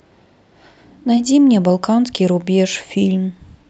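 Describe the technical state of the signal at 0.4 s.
At 0.4 s the speech signal is intact, with no dropout, glitch or distortion, only the steady character of the call codec, whose bandwidth points to an upper limit around 8 kHz.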